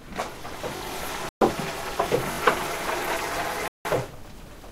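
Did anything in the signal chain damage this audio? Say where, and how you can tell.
Yes, at the driver or buffer stage there are two repeated buffer faults. New audio failed to arrive in time, so the device replayed its last block. At 0.77 to 0.81 s, a piece about 21 ms long sounds two extra times, and at 2.32 to 2.38 s the same-length piece repeats three extra times. Each repeat meets the next with a hard join, giving a short stutter. The 21 ms repeat length fits a 1024-sample buffer, and the sound resumes without losing anything afterward.

At the playback end there are also two sudden gaps of silence, from 1.29 to 1.41 s (123 ms) and from 3.68 to 3.85 s (173 ms). The sound cuts out abruptly and then returns. The likely cause is a Bluetooth stall: interference delayed packets on the wireless link, the headphones' buffer ran empty, and playback paused until the resent packets arrived, leaving these dead spots in the audio.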